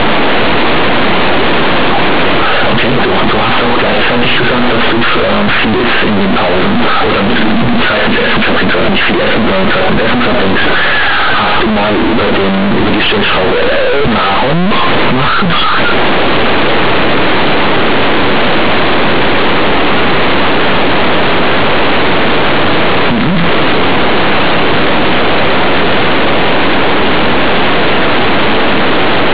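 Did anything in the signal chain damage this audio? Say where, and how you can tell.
Yes. Companded audio read as linear, throughout the clip, at the sample-format conversion stage: mu-law bytes reach playback as plain 8-bit samples without expansion. Every sign change then swings across about half the output range, so quiet passages sound as loud as peaks, giving harsh buzzy distortion, heavy noise in pauses, and, from the telephone coding, nothing above 4 kHz.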